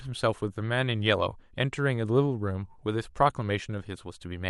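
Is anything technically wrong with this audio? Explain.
No, nothing technically wrong can be heard in this speech recording. There are no audible faults at any point in the clip.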